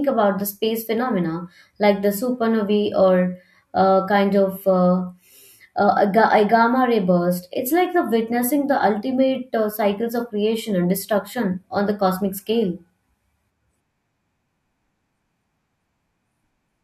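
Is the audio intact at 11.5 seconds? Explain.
Yes, the audio is intact at 11.5 seconds, with no fault at that moment.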